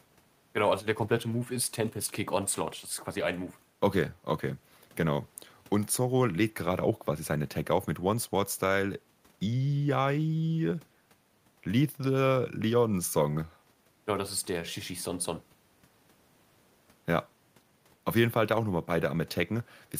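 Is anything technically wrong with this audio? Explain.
No, no technical faults heard.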